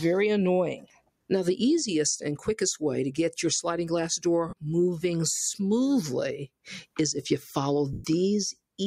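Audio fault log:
Throughout: noise suppressor applied to music or sounds. A speech-tuned suppressor treats held tones and tails as noise, so level swings by roughly 5 dB and pumps.
0.8–1.3 s: sound cut by the noise suppressor. The suppressor mistook this passage for noise, dropping it by up to about 19 dB for around 400 ms in total, so it sinks and thins.
4.49 s and 7.93 s: lost LE Audio frames. Dropped Bluetooth frames were concealed by repeating the last spectrum with randomised signs, smearing tones into noise for 37.5 ms, then 112.5 ms, the longer gap fading away.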